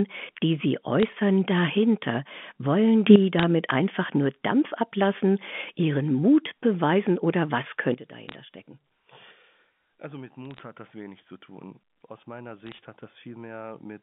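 From 1.00 to 1.13 s, bit errors on a digital phone line add a burst of sharp ticks. Flipped bits corrupt single samples, so crackle sits over the speech. At 3.07 s a sudden gain jump lifts speech and background together by about 11 dB until 3.16 s. A digital gain change applied without a ramp is the likely cause. More bit-error crackle follows from 3.39 to 3.43 s. At 7.94 s the level drops by about 15 dB and stays down to the end, again with the background moving with the speech. Further bit-error bursts come at 8.29 to 8.35 s, 10.45 to 10.63 s and 12.60 to 12.79 s, all over the narrow telephone band.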